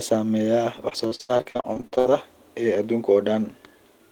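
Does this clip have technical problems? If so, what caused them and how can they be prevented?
Yes. Repeated packet loss (robotic sound) runs from 0.89 to 2.10 s: about fifteen short dropouts, the longest 77 ms, are each filled by extending the preceding sound, so roughly 42% of that stretch is concealment, giving a choppy quality. A steadier network connection and a larger jitter buffer would prevent this.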